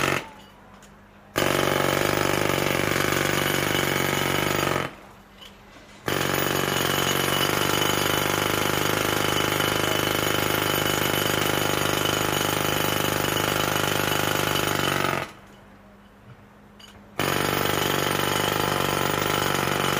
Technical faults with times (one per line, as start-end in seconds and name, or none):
none